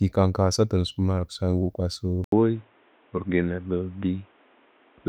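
Input switched to a poorer device at 2.24 s in this speech: after an 80 ms silence the sound turns dull and shifts in level, with nothing above 3.8 kHz, likely because a narrower-band microphone took over.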